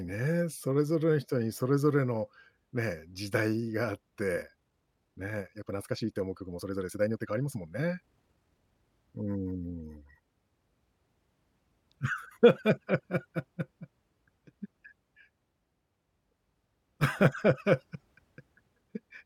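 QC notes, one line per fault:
4.34 to 8.86 s, time-stretched section: the likely cause is software compressing this stretch to fit a shorter slot, running it at about 1.54 times normal pace while holding pitch by discarding short slices of the waveform and splicing the remainder together. The speech suddenly rushes forward at an unchanged pitch, before the pace snaps back to normal at 8.86 s.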